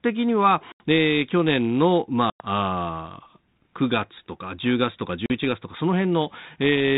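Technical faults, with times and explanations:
0.72–0.82 s, 2.30–2.46 s and 5.26–5.31 s, packet loss on an ADPCM call: three hard-edged silent holes of about 80, 100 and 40 ms, each a few packets' worth. After each gap the decoder's adaptive predictor and step size no longer match the sender's, so the speech comes back with a brief roughness before settling. The underlying G.726 telephone sound, consistent with 32 kbit/s, carries only light coding grit.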